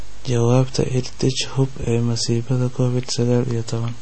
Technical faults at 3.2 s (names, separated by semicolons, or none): MP3 compression